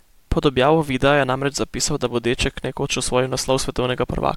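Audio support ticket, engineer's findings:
Bit error spike at 3.48 s in the speech. One sharp, bright tick, about -18 dBFS, a single sample, nothing to do with the surrounding audio. Looks like one flipped bit in memory or on a digital link: the sample value jumps by a power of two, then snaps straight back. That's why it's so short and broadband. Worth checking the link or buffer handling.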